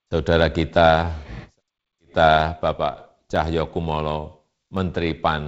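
Sharp single clicks cut through the speech at 0.43 s, 3.36 s and 4.77 s. Each is likely dropped samples: a fraction of a millisecond goes missing, so the waveform jumps abruptly, too brief to lose any sound, over a G.722 band that stops near 7 kHz.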